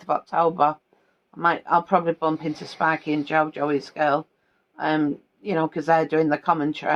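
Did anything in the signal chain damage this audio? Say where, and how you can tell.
Yes. Clock drift between sender and receiver runs through the whole clip, at the network and jitter-buffer stage. The sender's clock runs fast, by around 4 percent, so audio reaches the receiver slightly faster than it plays it out. The buffer keeps filling, and the receiver has to discard material to keep its latency bounded. Packet loss leaves gaps at random moments. This fault instead shows as a steady, one-directional timing pressure across the entire clip, with no gaps of silence.

The repeated timing corrections that result span 0.03 s to 6.59 s, with playback effectively pushed to about 104 percent. Each correction is a small cut in the audio. The cuts are unevenly spaced, but all remove material rather than repeating it. A resampling error would shift pitch along with tempo. Here the pitch holds steady and only the timing stumbles in small, scattered jumps, which points to buffer-level skipping.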